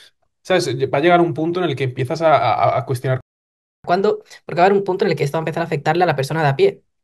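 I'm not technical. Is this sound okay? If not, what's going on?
No. There are two connected problems. The first is a playback stall: at 3.21 seconds the speech stops mid-flow and the audio goes silent for about 0.64 seconds, until 3.84 seconds. The player likely ran short of data or was briefly held up. This isn't a natural pause, because the sound cuts off abruptly instead of trailing off, then picks up again.

The second is catch-up at higher speed: from 3.84 to 6.84 seconds the player runs the backlog about 1.15 times faster to win back the lost time. The speech sounds hurried, and the pitch also rises by roughly two semitones, so the speaker seems slightly squeaky. That is different from someone simply talking faster, where the pitch stays the same. After 6.84 seconds both speed and pitch drop back to normal.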